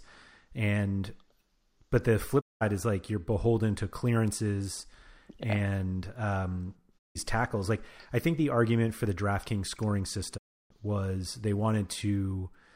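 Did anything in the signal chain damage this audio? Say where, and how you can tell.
Yes. A digital broadcast dropout hits this speech three times, at 2.40 to 2.63 s, 6.97 to 7.17 s and 10.36 to 10.72 s. Each time the sound fades out over about 20 ms into complete silence, then resumes further along, so the missing audio is simply skipped. The gap lengths, about 0.19, 0.16 and 0.32 s, fit whole 32 ms frames, which points to the reception stage: the receiver discarded corrupt frames and muted until clean ones arrived.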